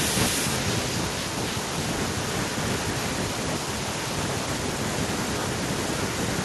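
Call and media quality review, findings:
Echo with no canceller, throughout: speech returns about a third of a second later, about 10 dB down, as a discrete thinner copy, not room reverb. Far-end loudspeaker-to-microphone path, with no echo canceller.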